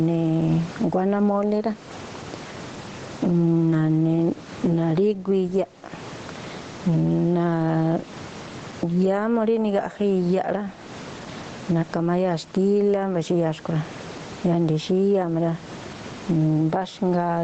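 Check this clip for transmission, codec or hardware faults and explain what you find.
One fault runs through the whole recording: gain pumping. The likely cause is input gain set far too high, with a fast limiter pulling the level down on each loud syllable. The gain swings by about 20 dB, so loud and quiet passages sit squashed together. The audio stops around 8 kHz, as the Opus call path is expected to, and the faint room noise belongs to the recording itself.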